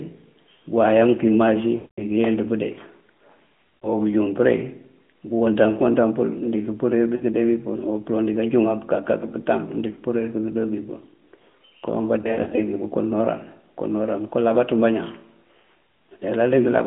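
At 1.76 to 2.04 s, lost AMR speech frames cut about 220 ms of signal. The decoder keeps repeating the last good pitch and vocal tract settings at falling gain, so the sound drags out and fades to silence before recovering weakly. The spectrogram shows frozen, smeared harmonics thinning to blank, and the waveform shows a decaying envelope. Brief 40 ms dips or warbles follow at 3.81 to 3.87 s and 7.16 to 7.23 s. Between 12.22 and 12.65 s, scattered losses totalling 160 ms, with runs up to 60 ms, bring repeated brief dips or warbles. The narrowband phone band, roughly 150 Hz to 3.4 kHz, stays intact throughout.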